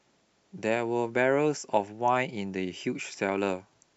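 A speech recording with no technical fault audible anywhere in it. There is nothing here that calls for a time or a cause.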